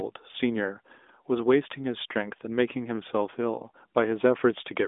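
This speech clip has nothing technically wrong with it, so there's no fault to point to anywhere in it.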